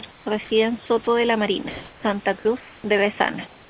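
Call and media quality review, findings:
Comfort noise in place of the background at 0.11–0.26 s, 1.70–2.03 s, 2.60–2.84 s and 3.47 s to end. The room background, about 28 dB below the loud passages, turns flat and featureless. The level shifts by about 4 dB down, about 2 dB up, about 2 dB down and about 2 dB down respectively. Likely sender discontinuous transmission: the voice detector stops sending during pauses, and the receiver synthesises RFC 3389-style shaped noise.

Sound dropped by the voice detector at 0.44–0.50 s, 1.04–1.07 s and 2.39–2.45 s. Speech is cut and replaced by steady noise, losing 30 ms, 30 ms and 40 ms of speech. Likely the sender's voice detector classing low-level speech as background and halting transmission until retriggered. Steady noise fills each gap. Everything sits in a band ending at 4 kHz, which fits a narrowband G.711-type call path.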